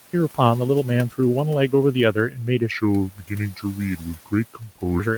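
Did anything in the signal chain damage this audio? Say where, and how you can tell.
Yes. Speech cut by the noise suppressor, in call processing: syllables dip by about 10 to 12 dB at 2.14–2.40, 3.10–3.31, 3.51–3.79, 3.97–4.32 and 4.54–4.77 s, where the suppressor mistook speech for noise.

Section at the wrong speed, at playback: from 2.71 to 5.00 s the audio runs at 0.8 times speed, about four semitones lower and slower, likely from a clock mismatch.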